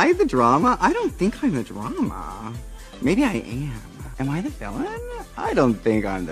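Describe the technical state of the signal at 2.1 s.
At 2.1 s the signal sits inside a run of clock drift buffer slips lasting from 0.68 s to 6.08 s. A short click recurs every 0.6 s, about ten in all. The likely cause is two devices running on separate clocks, differing by roughly 300 parts per million. The buffer between them slowly drifts until a few samples, around seven, are dropped or repeated. Each slip breaks the waveform and is heard as a tick.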